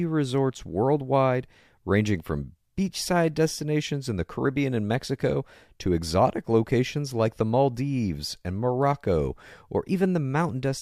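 No technical faults turn up anywhere in this speech recording, so there's nothing to flag here.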